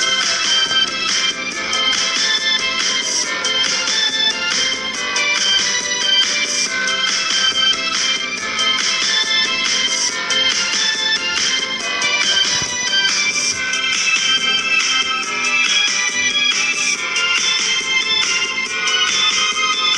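No technical faults can be heard anywhere in the signal.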